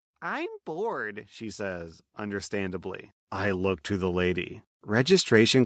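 From 0.65 s to 5.38 s the whole clip grows steadily louder, with the voice and the room noise behind it swelling together by about 17 dB rather than the speaker getting louder. This is automatic gain rising: the automatic gain control judged the incoming level too low and kept raising its gain over several seconds, lifting the background along with the speech. The audio also stops at about 8 kHz, as expected from the call codec.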